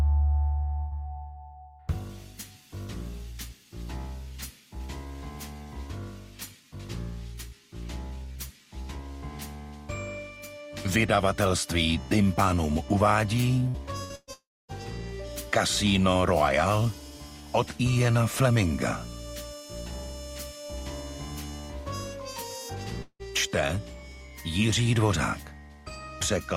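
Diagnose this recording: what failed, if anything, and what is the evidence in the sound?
The network path lost packets in bursts, and the receiver concealed each gap by extending the last sound and fading it out. This burst of packet loss appears at 0.79–0.94 s, 13.68–13.77 s, 14.04–14.12 s and 14.15–14.30 s. Each is a brief held buzz or hiss lasting roughly 55 to 120 ms, after which the audio resumes with that much material missing. In the last burst, the fill decays into about 30 ms of silence.

A long network dropout is the likely cause of two longer breaks, where audio stopped arriving for several tenths of a second. At 14.33–14.71 s, directly after the cluster of bursts, concealment fills about 350 ms, stretching the last sound. It fades to roughly 270 ms of silence, and the audio returns with about 360 ms skipped. At 23.02–23.22 s, a shorter fill fades into about 70 ms of silence, and about 180 ms is lost.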